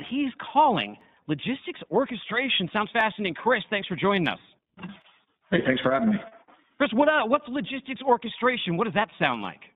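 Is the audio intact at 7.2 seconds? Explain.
No. At 7.2 seconds, as throughout the clip, the speech carries iLBC codec damage. The line is confined to roughly 150 Hz to 3.7 kHz, and each 20 ms frame is coded independently, which fits the 15.2 kbps mode. The result is plainly rough, synthetic-sounding speech.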